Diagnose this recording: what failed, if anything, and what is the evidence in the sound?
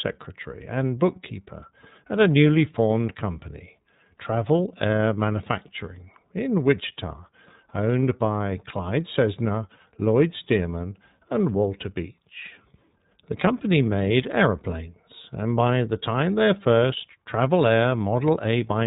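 The failure sits at the codec stage: the whole recording has passed through the iLBC codec, and the damage is plainly audible from start to finish. The speech sounds clear but rough and slightly synthetic, which fits iLBC's 30 ms frame mode at about 13.3 kbps, where each frame's excitation is coded on its own. A spectrogram would show a hard ceiling, with nothing above 3.8 kHz across the entire clip.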